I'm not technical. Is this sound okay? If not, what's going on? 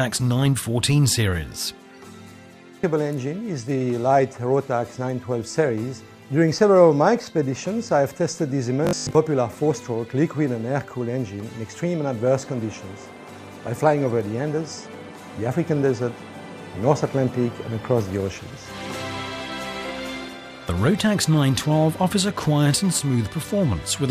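No. From about 8.85 to 9.15 s there's robotic sound from repeated short buffers: it turns into a flat, metallic 50 Hz buzz. Audio likely arrived too slowly, so most of that moment is tiny repeated slices, which fits a 20 ms chunk.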